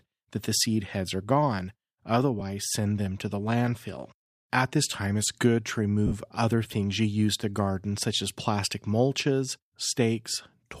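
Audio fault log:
2.40 s, lost LE Audio frames: one 10 ms frame went missing just before "send them to the", and the LC3 decoder, likely running at about 64 kbps, filled the gap with the previous spectrum carrying random signs, leaving a brief noisy smear.
6.07–6.13 s, lost LE Audio frames: about 50 ms of frames were lost between "time it's good to" and "other things you use". The repeated, sign-scrambled spectrum fades toward silence across the gap, so the sound blurs into hiss and then dips.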